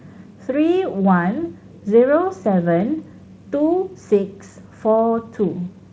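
No technical faults occur at any point in this speech recording, so there is nothing to describe in time order.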